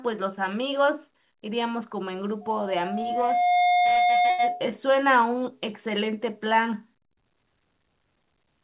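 From 2.41 to 4.70 s there's a loudspeaker feedback squeal: the mic catches its own speaker, and a 716 Hz tone swells over about a second to sit around 5 dB above the speech. Near the end of that, from 4.30 to 4.41 s, comes a short stall from a late packet. The jitter buffer ran dry, so the receiver stretched the last sound for 85 ms with nothing lost. It sounds like a brief hold or smear. All of it comes through a narrowband call path that cuts off at 4 kHz, which fits G.711.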